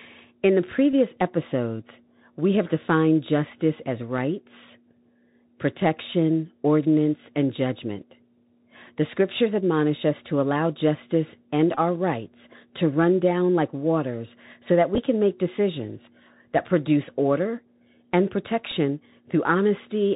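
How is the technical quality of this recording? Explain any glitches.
The recording has clear technical damage: the whole clip carries narrowband headset-codec coloration, and four short dropouts are patched over by repeated audio.

Bluetooth CVSD headset codec, throughout: the speech travels over a Bluetooth headset link whose codec sends a single up-or-down bit per sample at 64 kHz and adapts its step size on the fly. Everything above about 4 kHz is gone, so the voice sounds boxed-in. Sibilants come out scratchy, loud bright passages distort where the signal outruns the step, and a grainy hiss sits beneath the speech.

Bluetooth headset packet repeated, at 0.92 s, 11.75 to 11.79 s, 14.95 to 14.98 s and 18.71 s: when packets between headset and phone went missing, the chip replayed the previous packet's bits in their place. At 0.92 s about 15 ms is covered this way, enough for a brief buzzy tick. 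Between "to allow justice and" and "rights to run down" the gap is about 19 ms, long enough for a short buzz near 267 Hz, the rate of repeating 3.75 ms packets. Between "like waters so that" and "can make decisions that" about 15 ms of repeats are scattered over 30 ms, with no stretch much beyond 7 ms. Just after "that produce order and" a 7.5 ms repeat, consistent with two packets, leaves a small tick.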